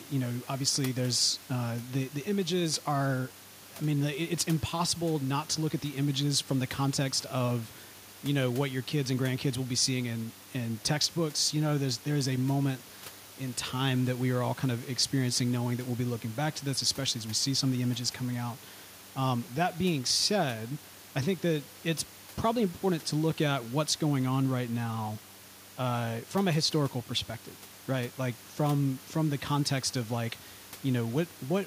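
Nothing stood out on listening to this speech recording, with only a low room background sitting about 23 dB below the talker.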